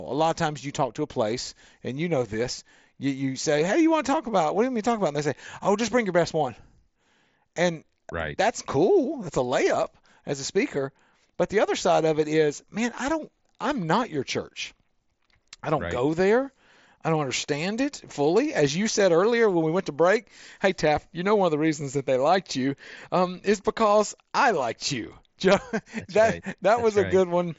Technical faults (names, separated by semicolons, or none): none